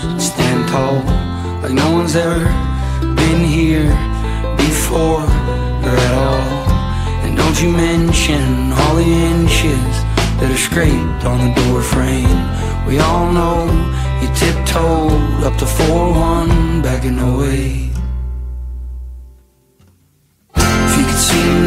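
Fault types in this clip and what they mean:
No technical faults can be heard anywhere in the clip. There is nothing to list for it.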